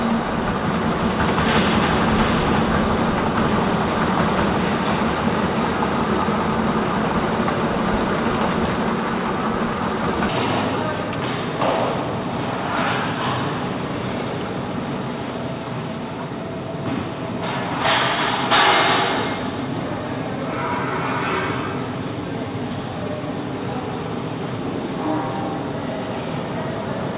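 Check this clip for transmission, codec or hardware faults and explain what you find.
One transmission fault is present, a doubled audio track. The band stops near 4 kHz, consistent with the G.711 A-law call path.

From 1.50 s to 8.50 s, a doubled audio track: a second copy, about 5 dB quieter, trails roughly 0.7 s behind, likely from a slower capture path, and starts and stops abruptly.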